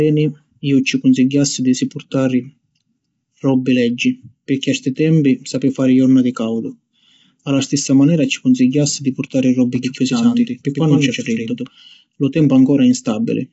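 Throughout, the speech has the plainly audible roughness of low-delay AAC compression, likely AAC-ELD at a rate fitting 24 kbps, with nothing above 7.7 kHz. From 9.76 to 11.68 s, a doubled audio track appears: a second full-band copy, likely from a slower capture path, trails about a tenth of a second behind at roughly 5 dB lower. Unlike a room echo, it has no decay and starts and stops abruptly.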